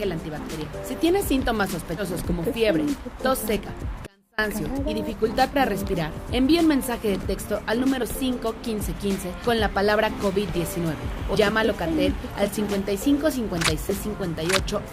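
Compressed frames skipped occur at 0.65 s, 1.97 to 2.01 s and 3.56 to 3.60 s. The sound jumps forward by roughly 70, 100 and 40 ms, which fits whole 10 ms frames going missing or being rejected by the decoder.

An audio dropout to a faint residue runs from 4.07 to 4.38 s, lasting about 320 ms. The sound cuts off abruptly and leaves only a faint trace about 35 dB below normal level. The likely cause is the wanted signal being lost while the downstream path stayed live.

More compressed frames are skipped at 5.53 to 5.56 s, 8.02 s, 9.45 s, 11.34 to 11.37 s and 13.89 to 13.92 s. The jumps are roughly 70, 40, 150, 70 and 70 ms.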